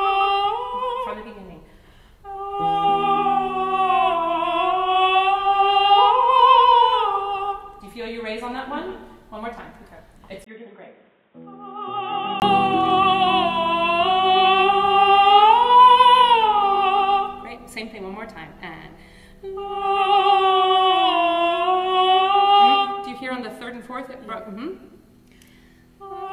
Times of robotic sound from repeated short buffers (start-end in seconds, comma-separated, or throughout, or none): none